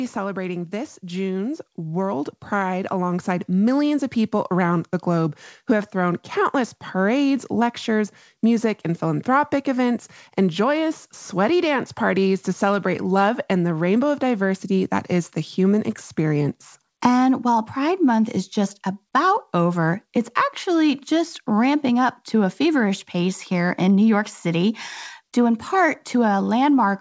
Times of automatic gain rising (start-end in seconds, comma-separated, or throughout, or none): 0.70-4.60